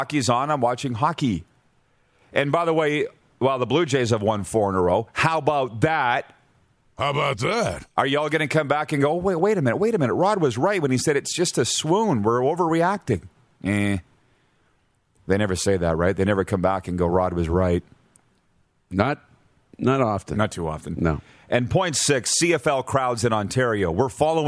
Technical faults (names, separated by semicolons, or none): none